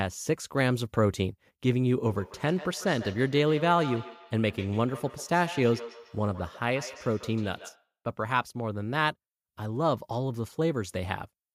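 From 2.07 to 7.91 s, a feedback echo between two devices brings the speech back roughly every 150 ms, peaking about 14 dB below it. Unlike room reverberation's smooth tail, these are distinct delayed copies: a second device's playback re-enters a microphone whose canceller ignores it.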